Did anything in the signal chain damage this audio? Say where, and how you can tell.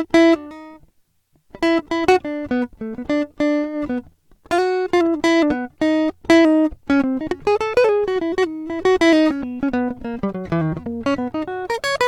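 No, nothing in this music stood out on listening as damage from any stage of the signal chain.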